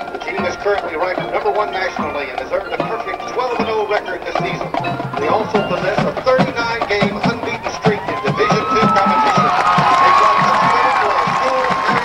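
No technical faults can be heard anywhere in this audio. Nothing in it breaks, drops out or changes unexpectedly at any point.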